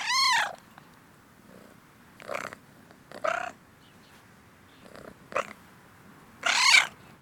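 From 2.87 s to 5.39 s the sound picks up a faint gritty fizz, a crude rate conversion artefact, sitting roughly 40 dB under the signal and tracking the louder, brighter moments. The tones it adds are shifted, inharmonic copies of the material, which fits samples being linearly interpolated across something like a 44.1 kHz to 48 kHz change with no proper filtering, so the error repeats in a fixed inharmonic pattern.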